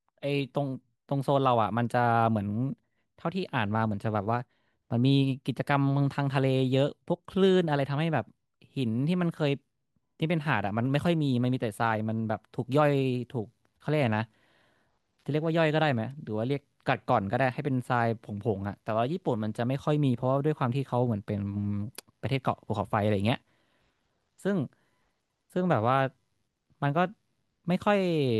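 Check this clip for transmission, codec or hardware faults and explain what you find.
No transmission, codec or hardware fault can be heard anywhere in this speech recording. There is nothing to flag or explain.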